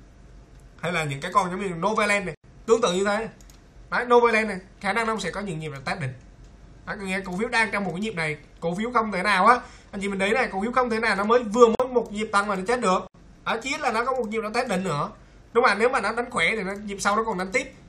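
Three blocks of digital silence break the sound, at 2.35 to 2.44 s (about 93 ms), 11.75 to 11.80 s (about 46 ms) and 13.07 to 13.14 s (about 70 ms). Each is an abrupt hole, heard as short dropouts. On a waveform the trace falls to a flat line and jumps back with no fade. A spectrogram shows clean vertical gaps. The lengths are all multiples of one unit, which fits 1024-sample buffers not being filled in time.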